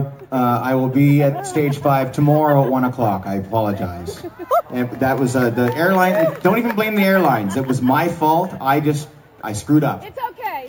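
Throughout the clip there is imaging from sample-and-hold upsampling. Each sample was simply repeated, which points to a 16 kHz source raised to 48 kHz, leaving mirrored spectrum copies between 8 kHz and 16 kHz at about -23 dB. It sounds like a metallic fizz that tracks the level, and unlike steady hiss the lowest copy moves opposite to the pitch.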